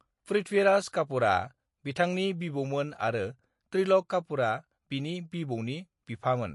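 A short speech recording carries MP3 compression damage from start to finish. Nothing is present above 11.3 kHz. The treble stops at a hard ceiling instead of fading naturally. The remaining sound has a watery, swirly texture that is plainly audible. This is likely an encoder starved of bits, which fits a low bitrate around 48 kbps. It cut the top band and dropped weak frequency lines, which flicker on and off between frames.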